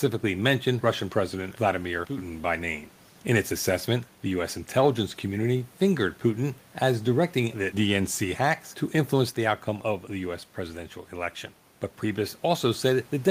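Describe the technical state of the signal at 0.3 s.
At 0.3 s the signal is intact, with only the room's own background noise sitting about 32 dB below the speech.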